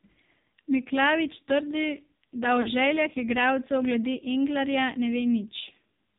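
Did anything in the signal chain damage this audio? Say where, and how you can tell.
Yes. At the codec stage, AMR narrowband mobile coding removes everything above 4 kHz and leaves speech buzzy and synthetic, which fits a low-rate mode near 5.9 kbps.

In the network, lost AMR speech frames cause a brief warble at 0.40 s and a 40 ms drawn-out fade at 2.62–2.69 s, just before "željah igralcev glede". The decoder is concealing them by repeating the last parameters with falling gain.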